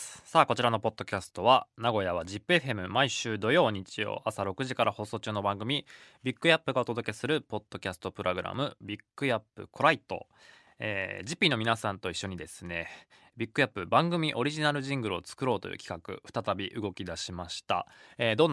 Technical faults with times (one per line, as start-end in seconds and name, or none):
none